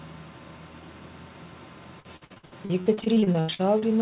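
Repeated packet loss (robotic sound) runs from 2.0 s to 3.84 s. Packets went missing again and again, and each hole was patched by extending the preceding sound before the next loss arrived. Well over a dozen gaps, the longest 81 ms, leave about a third of the stretch concealed, giving a choppy, robotic texture with fragments dropped. The narrowband call path, with nothing above 4 kHz, fits G.711 mu-law.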